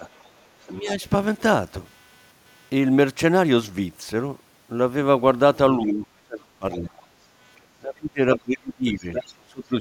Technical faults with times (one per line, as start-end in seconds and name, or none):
0.00-9.81 computer activity noise
0.00-0.07 speech suppressed in double talk
0.15-0.91 other side's voice leaking through
0.67-1.04 speech suppressed in double talk
5.78-7.20 speech suppressed in double talk
6.72-6.79 other side's voice leaking through
7.79-9.74 speech suppressed in double talk
8.34-8.38 other side's voice leaking through
8.98-9.35 other side's voice leaking through